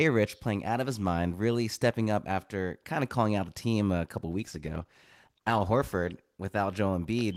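Right after "the team a couple", at about 4.4 s, there's a call bitrate drop that runs until roughly 6.95 s. The call's bandwidth estimate fell and the encoder got squeezed onto far fewer bits, which fits a slide from around 40 kbps down to about 15 kbps. The speech goes coarse, rough and muffled, at its worst for about 1.2 s, before the detail comes back as the bitrate recovers.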